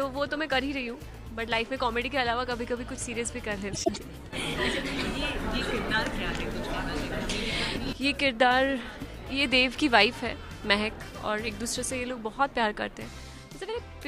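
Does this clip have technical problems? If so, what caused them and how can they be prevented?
Yes. From 3.73 to 3.99 s there are frames out of order: two neighbouring blocks of about 0.1 s each, consistent with runs of four frames, were decoded in swapped order, so the passage plays with its halves exchanged and sounds like a garbled flutter, with no time lost. A spectrogram shows abrupt vertical seams at the joins. Using sequence numbers with a reordering jitter buffer prevents this.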